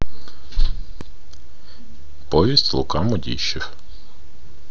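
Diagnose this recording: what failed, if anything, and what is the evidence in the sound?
A single sharp tick cuts through the speech at 1.01 s: a block of digital silence about 1.4 ms long, with the waveform dropping to zero and back with no fade. This points to the driver or buffer stage, where output samples weren't delivered in time and were zero-filled.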